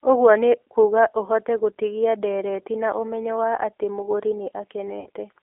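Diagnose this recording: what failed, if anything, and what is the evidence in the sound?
The codec stage is at fault: the whole speech clip passed through a G.729 low-bitrate speech codec, which fits an 8 kbit/s link. It rebuilds each frame from a filter and pitch model, so the band sits between 300 Hz and 3.5 kHz and the voice sounds plainly rough and synthetic.

At the network stage, packets were dropped and the decoder filled the gap by VoIP packet loss concealment, from 4.99 to 5.09 s. The lost stretch is about 60 ms, which fits two missing packets. The last frame's pitch and filter are stretched and faded out, and the speech stays weakened briefly afterwards.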